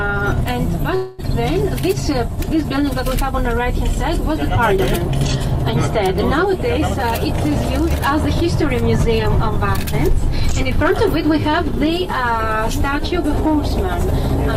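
At 0.95 s the sound stalls into a fading buzz until 1.21 s, about 232 ms of filler with nothing silent. This is a call audio freeze, likely from packets held up in transit. Unlike a dropout, playback resumes exactly where it stopped, so nothing is lost and the delay grows by that amount.

From 6.90 to 7.04 s a jitter buffer speed-up runs at 149% speed, trimming roughly 70 ms of surplus buffered audio in repeated pitch-period cuts. A gentler pass from 10.08 to 13.46 s runs at 103%, removing roughly a tenth of a second. Unlike a pitch shift, the pitch stays put while the timing hurries.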